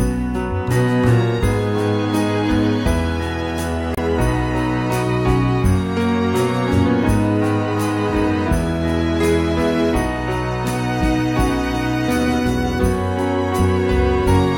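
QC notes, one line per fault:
3.93–3.99 s, damaged data in a compressed stream: corrupted bytes make the decoder lose frame sync and hunt for the next header, leaving a brief audible glitch.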